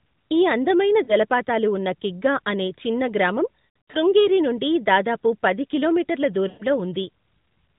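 Narrowband mobile speech with lost AMR speech frames at 1.04–1.14 s after "ఈ అందమైన", 3.85–3.96 s after "కిగ్గా అనే చిన్న గ్రామం", and 6.48–6.63 s after "నుండి దాదాపు పది కిలోమీటర్ల". At each point the decoder stretches out the last good frame with falling level, causing brief smeared dropouts.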